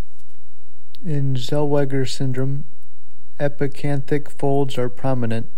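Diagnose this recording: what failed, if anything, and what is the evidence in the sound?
The recording carries a DC offset throughout, most likely from the converter or the analogue input stage feeding it. A constant of about -13 dBFS sits under the whole waveform, so the speech rides on a shifted baseline rather than around zero. The offset itself is inaudible as a tone. The evidence is steady energy at the very bottom of the spectrum for the full clip and lost headroom, since peaks on one side sit closer to full scale.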